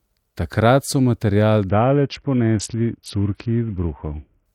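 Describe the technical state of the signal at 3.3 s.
At 3.3 s the signal sits inside a Bluetooth SBC bit pool drop. It runs from 1.69 s, just after "so material", to 4.46 s. The link was congested, so the sender cut the bits per frame. The top sub-bands got almost nothing and the rest were coarsely quantised. The speech sounds dull and muffled, with gritty noise underneath. The sound points to a bit pool falling from about 31 to 6, which fits roughly 55 kbps.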